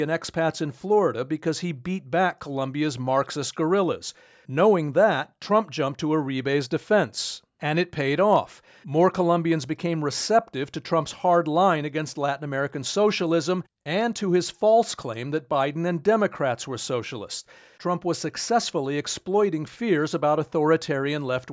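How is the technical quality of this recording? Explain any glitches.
No glitches turn up anywhere in this speech recording; it has simply been through a call's microphone processing, which trims the deepest bass and leaves nothing above 8 kHz, and that's just how call audio normally sounds.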